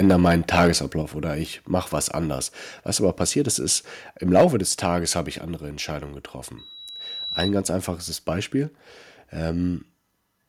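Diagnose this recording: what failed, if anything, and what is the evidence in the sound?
Harsh, crackling tops on the speech from 0.03 to 0.7 s and again at 4.35 to 4.45 s, peaks pushed about 7 dB over full scale, likely microphone overload clipping at the converter.

Abrupt drops in level at 1.02 s, about 5 dB, and at 4.41 s, about 2 dB, each following a crackle. This points to call processing likely stepping the microphone volume down.

A 3.9 kHz tone swells over roughly 0.7 s into a squeal from 6.58 to 7.53 s, about 5 dB above the speech. This is loudspeaker feedback, with the microphone re-amplifying its own loudspeaker.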